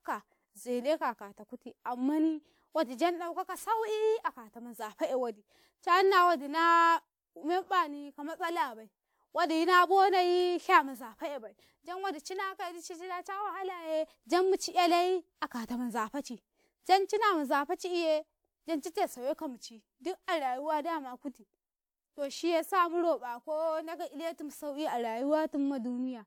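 Generation loss throughout: the speech sounds swirly, hollow and smeared, with blurred attacks, likely from roughly three WMA re-encodes at what sounds like 128 kbit/s.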